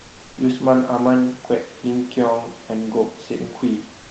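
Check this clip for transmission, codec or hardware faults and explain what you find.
One fault shows up at the very end of this speech clip. From 4.03 s to 4.1 s, the last 76 ms, the background is replaced by comfort noise. Once the speech stops, the room noise, which sits about 28 dB below the loudest parts, turns into a steady, featureless hiss about 1 dB different in level. The likely cause is discontinuous transmission in the Opus call codec. The sender stops sending frames when its voice detector finds no speech, and the receiver fills the gap with synthetic noise shaped roughly like the real background. The speech band reaches about 8 kHz, as expected for this call path.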